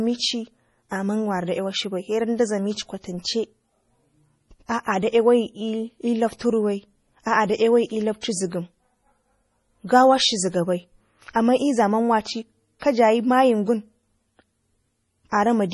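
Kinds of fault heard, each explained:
MP3 compression: heavy watery, swirling speech throughout, likely from this codec; spectrogram shows a flat ceiling at 11.4 kHz with flickering holes, fitting 32 kbps.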